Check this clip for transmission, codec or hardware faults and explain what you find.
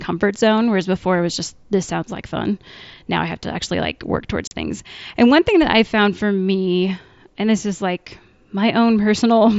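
One transmission fault is present: a single unconcealed Bluetooth headset packet loss, heard over a wideband mSBC headset link whose light graininess and 8 kHz ceiling are part of the normal path. From 4.47 to 4.52 s, between "to actually like work" and "things and one thing", the audio drops out for about 40 ms. A run of voice packets between headset and phone never arrived, and silence or an idle pattern took their place. The gap, which fits five lost 7.5 ms mSBC frames, plays as a hard hole with abrupt edges. A concealed loss would smear or repeat the preceding sound across the gap. Here the gap is an abrupt hole.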